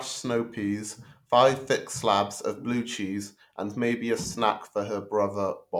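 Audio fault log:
There is no fault in this speech recording.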